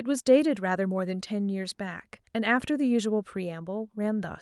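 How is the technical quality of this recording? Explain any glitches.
No glitches are audible anywhere in this speech recording.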